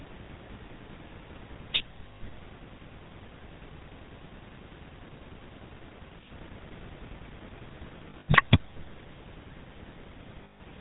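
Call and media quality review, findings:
GSM full-rate codec, throughout: buzzy, gravelly roughness, nothing above 4 kHz, consistent with a 13 kbps full-rate speech coder with sparse pulse excitation. Distinct from simple band-limiting: the grit, not the dullness, is the symptom.

Lost GSM frames, 8.10–8.35 s (140 ms lost, scattered over about 240 ms, longest run around 70 ms) and 10.44–10.61 s (160 ms): metallic ring as the last good frame repeats. A held tone, not the silent gap of dropped packets.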